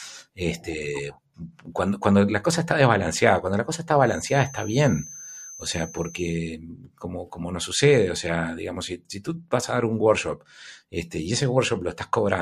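From 3.98 to 6.42 s a thin 6.2 kHz tone sits about 20 dB under the speech: a feedback whistle, likely from a loudspeaker-to-microphone loop held on the edge.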